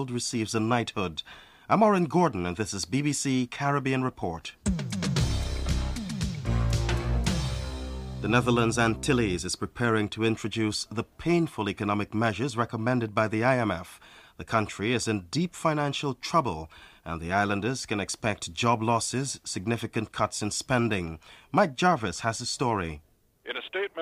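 No technical faults can be heard anywhere in this audio. There is nothing in the signal that calls for a timestamp or a correction.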